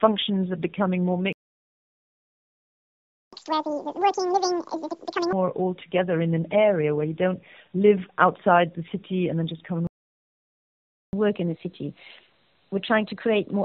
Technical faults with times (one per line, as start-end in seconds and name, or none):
0.00-13.64 tandem speech coding
1.33-3.33 playback stall
3.33-5.33 catch-up at higher speed
9.87-11.13 playback stall
11.13-13.64 catch-up at higher speed